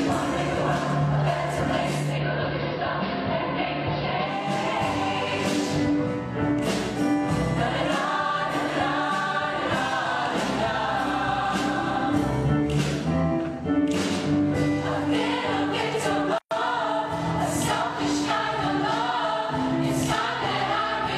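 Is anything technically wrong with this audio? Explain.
Yes. From 1.88 to 4.59 s there is digital radio blending to analogue. The receiver lost its digital signal and cross-faded, over about 341 ms, to the AM broadcast. Level drops about 2 dB. Faint hiss appears, roughly 35 dB down.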